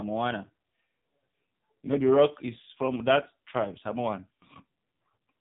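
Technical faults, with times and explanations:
Throughout: AMR narrowband mobile codec. Speech is band-limited below 4 kHz and sounds buzzy and synthetic, with heavy damage that fits a low-rate mode near 5.9 kbps.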